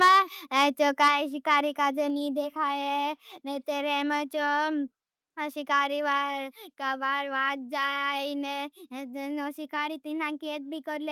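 Right at the start, from 0.01 to 0.19 s, there's microphone overload: the peaks crunch with a harsh, crackly edge, running about 5 dB past the converter's limit with roughly a tenth of the samples flattened. That's most likely the input gain set too hot for the converter. At 0.08 s the microphone volume is stepped down by about 2 dB, an abrupt level drop that is likely the call software reacting to the clipping. The same thing repeats from 1.01 to 1.11 s, with overload again about 5 dB over but fewer samples clipped. At 1.08 s there's another step down of about 4 dB.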